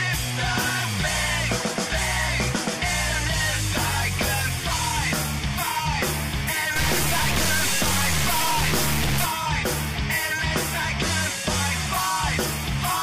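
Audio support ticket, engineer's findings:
Harsh, buzzy distortion from 6.76 s to 9.25 s. Quiet passages fill with hiss instead of silence. Pattern fits a stuck bit, likely a failed data line or converter. Error step sits roughly 20 dB below full scale. That is a high bit, so the noise floor rises sharply and the distortion tracks the waveform.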